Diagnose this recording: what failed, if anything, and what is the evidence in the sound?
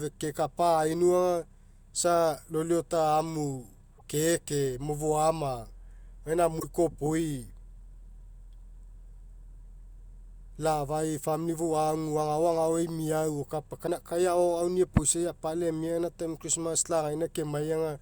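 Three brief glitches break the speech at 3.97–4.01 s, 6.59–6.64 s and 13.86–13.89 s. Each jumps abruptly forward in the sound, lasting 28 to 52 ms, on the scale of one or two 24 ms MP3 frames. The stage is the codec, and the likely cause is a broken MP3 bit reservoir. Frames were dropped, so the next frame reached back for borrowed data, found bytes from the wrong frame and decoded them as if they were its own.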